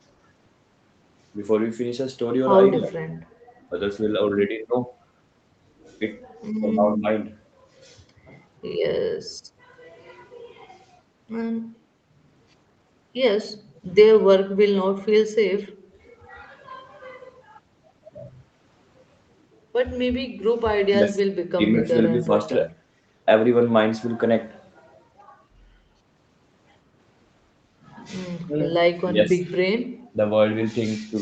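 Speech suppressed in double talk, likely caused by an echo canceller that could not tell the near talker from loudspeaker echo while both sides spoke and so pulled both down, first appears from 2.74 to 2.95 s. The speech sags by about 15 dB there, then dips more gently, by about 10 dB, somewhere between 6.6 and 7.04 s.

From 15.77 to 15.93 s the background is gated by the echo canceller. It clamps the microphone hard while the loudspeaker plays, and the room tone drops by about 13 dB for a brief moment before springing back.

The double-talk suppression returns more heavily from 20.9 to 22.8 s, where roughly a second of speech is carved down by as much as about 20 dB. Another cut of about 20 dB falls between 28.46 and 29.33 s. A last brief clip, about 15 dB deep, comes at 30.12 to 30.17 s.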